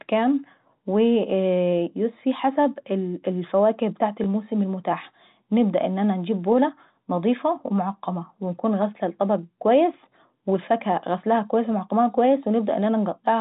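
At 4.24 s, between "يوسفي حسب الفاوكه ابتاعت" and "المتاحة نبدا ان انا", there is a brief packet loss with last packet repeated. About 20 ms of audio went missing, which fits a single lost packet, and the receiver replayed the preceding packet in its place. The single repeat gives a small blip. A silent gap would sound like a dropout, and a longer run would turn into a steady buzz. This is over almost instantly, against the band-limited telephone sound of the G.711 coding.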